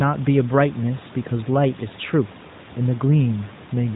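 Nothing stood out on listening to this speech clip.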